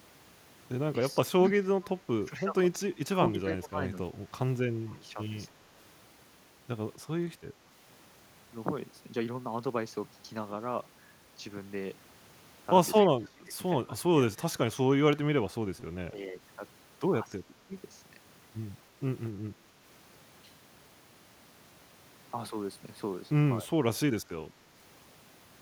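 From 1.21 to 7.74 s the speech is intermittently pulled down, by about 15 dB at its deepest and for roughly two seconds in total, dipping and thinning in pieces. This is speech suppressed in double talk. The likely cause is an echo canceller that, with both ends talking at once, could not tell the local talker from loudspeaker echo and attenuated everything. The same pumping returns from 13.14 to 17.72 s, deeper at about 20 dB and covering about one and a half seconds. A milder case follows from 23.61 to 24.73 s, at about 5 dB and a few hundred milliseconds.

Inside the first stretch, at 1.44 to 1.50 s, a faint delayed copy of the speech appears 258 ms behind the original, about 25 dB below it. This is echo leak, likely from a far-end loudspeaker whose echo canceller let some microphone pickup through and back down the line. A second scrap, at 13.01 to 13.06 s, is slightly louder at about 20 dB down, with the same 258 ms delay.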